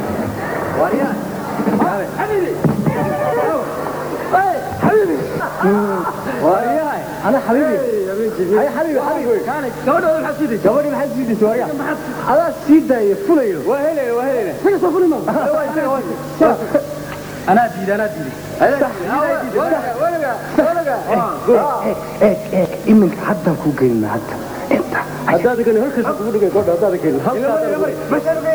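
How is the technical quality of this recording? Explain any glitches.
The quality is compromised by low bit depth with dither, present throughout. The audio is reduced to 7 bits, with noise added before rounding, so the error becomes a steady, even hiss around 25 dB below the signal. Unlike undithered truncation, it carries no gritty distortion that follows the sound.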